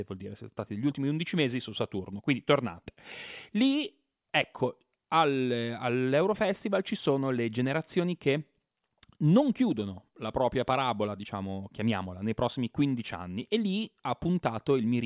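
No technical faults can be heard anywhere in the speech recording, with the signal holding steady from its opening to its close.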